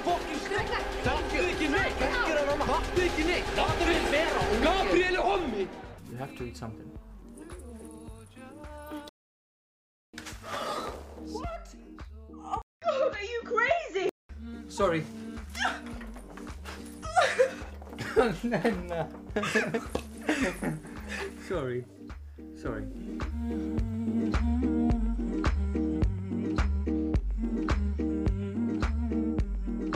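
A playback stall at 9.09 s cuts the sound dead for about 1.04 s until 10.14 s, most likely because the player ran short of data before resuming.

At 12.62 s the input switched to a poorer device, likely a fallback microphone: after a 0.2 s gap, the sound turns dull, with a narrower band and a faint new noise floor, until 14.29 s.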